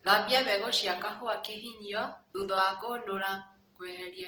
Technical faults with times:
0.00-4.27 Opus compression

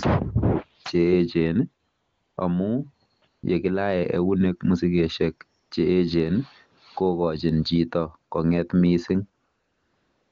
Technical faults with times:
1.89-2.37 AMR comfort noise
3.17-3.43 AMR comfort noise
5.59-5.71 AMR comfort noise
9.45-10.32 AMR comfort noise

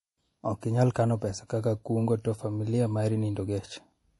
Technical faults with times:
0.00-4.19 MP3 compression

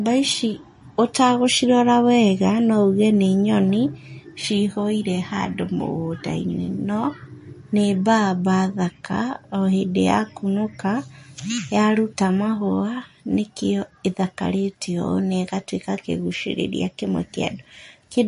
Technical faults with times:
0.00-18.27 MP3 compression

